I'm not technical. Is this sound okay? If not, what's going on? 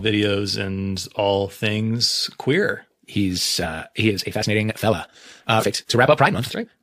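No. At 3.63 to 3.67 s and again at 5.59 to 5.63 s the speech jumps ahead. These are compressed frames skipped: chunks of the audio file, each about 43 ms long, were missing or damaged, so roughly a tenth of a second and then about 0.15 s of speech is lost.

From 4.06 s to the end, the speech suddenly becomes rushed, about 1.74 times faster, while the pitch stays the same. This is likely a time-stretched section, where software squeezed the audio to fit a shorter length by dropping tiny slices.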